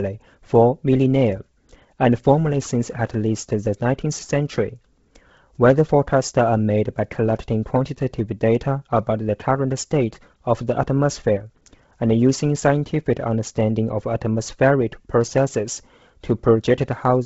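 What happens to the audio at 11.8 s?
At 11.8 s the speech has the grainy, breathy edge present throughout, with nothing above 7.7 kHz, likely from heavy Bluetooth LC3 compression at a bitrate near 16 kbps. It differs from plain low-pass filtering because high bands are noise-filled.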